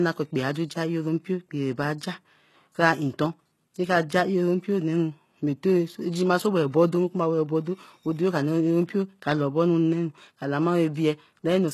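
Throughout, the speech has gritty, lispy s sounds and nothing above 12.3 kHz. This is likely HE-AAC compression rebuilding the treble from copied lower bands, as at about 16 kbps.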